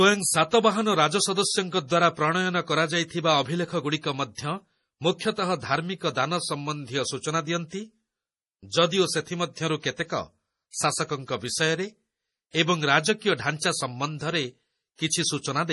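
MP3 compression damage runs throughout this speech clip and is heavy. Nothing comes through above 11.5 kHz, and weak spectral detail drops in and out between frames, giving a watery, swirly texture with chirpy sibilants and smeared attacks. The sound points to a low bitrate, likely around 32 kbps.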